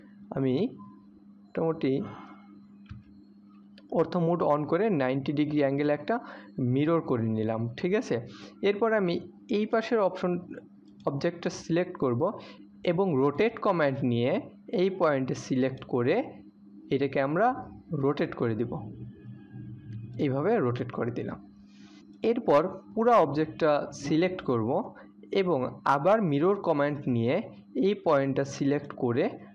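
No technical faults are audible anywhere in the audio.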